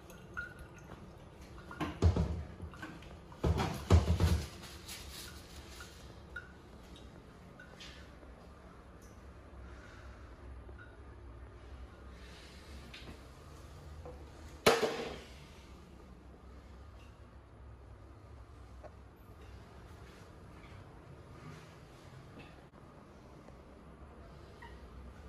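Nothing here trips any alarm: no dropouts, glitches, clicks or other technical trouble turns up anywhere along the way.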